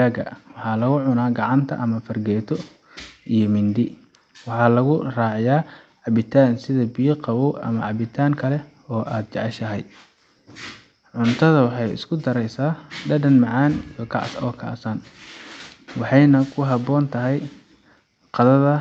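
No technical faults are audible.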